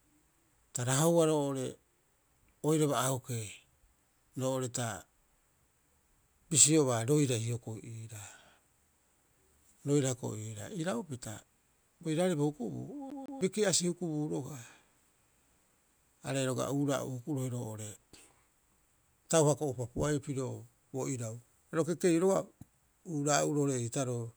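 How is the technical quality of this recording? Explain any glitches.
The recording has one clear glitch, a CD stuck on one turn, from 13.10 to 13.41 s in the speech. A short stretch of audio, about 154 ms long, plays twice in a row, with a brief mute at each jump back. The pattern comes from the laser being knocked back one track at a damaged spot on each rotation, so the same slice keeps returning. It produces a quick, evenly timed stutter.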